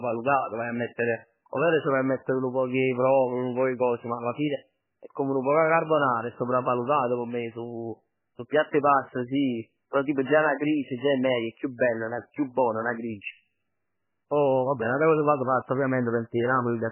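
From start to finish the speech sounds like it has been through heavy MP3 compression. Nothing comes through above about 3 kHz, so it's dull and boxy, and the damage is strong enough to fit a very low bitrate around 8 kbps. The likely cause is an encoder starved of bits: it chops off the treble at a fixed point and drops the weaker frequency lines, which flicker in and out frame to frame, giving that watery, swirly texture.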